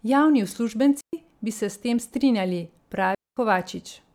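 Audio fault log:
1.01–1.13 s and 3.15–3.37 s, digital wireless dropout: the sound cuts to near silence for about 0.12 s, ending just before "bi se", then for about 0.22 s. The receiver lost too much data and muted with a very short fade. No noise burst surrounds either hole.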